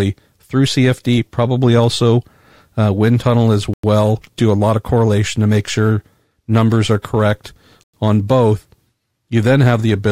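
Gap between chunks at 3.74 s, after "uh wind tunnel as", and 7.84 s, before "on both". Silence splits 4-second blocks. Each hole lasts 100 ms.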